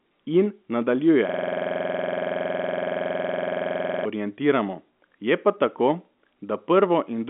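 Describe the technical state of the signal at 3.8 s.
At 3.8 s the signal is frozen in a system hang loop running from 1.29 s to 4.06 s. The computer or driver stalled while the hardware replayed one 46.4 ms slice of its ring buffer, which fits a 2048-sample buffer, about 60 times. That produces a rough 21.5 Hz machine-gun stutter. On a waveform it shows as identical repeating blocks. A spectrogram shows vertical striping at that rate, still band-limited near 3.4 kHz by the telephone coding.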